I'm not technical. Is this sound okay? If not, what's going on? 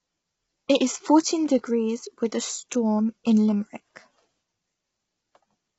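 No. Throughout, the speech sounds rough and grainy, with hiss between tones and nothing above about 7.7 kHz, likely from heavy low-delay AAC compression, unlike plain muffling, which stays smooth.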